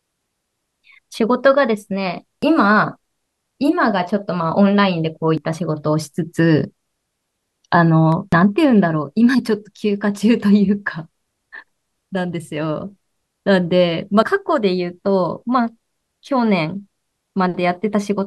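Speech with four short skips at 2.43, 5.38, 8.33 and 14.23 s, each dropping roughly 50 ms with the edges butted together. Their spacing of about 3 s points to audio missing between chunks, likely from a chunked recorder. On the waveform each shows an abrupt step, and on the spectrogram a thin vertical seam. At 8.12 s a sharp snap sits on top of the speech, likely an electrical switching spike. It appears as a vertical broadband line on the spectrogram and a narrow, tall spike on the waveform.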